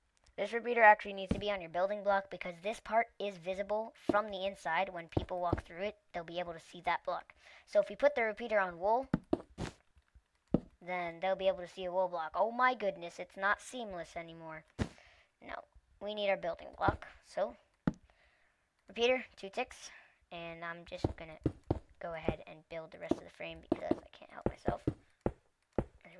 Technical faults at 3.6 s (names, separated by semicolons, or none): wrong sample rate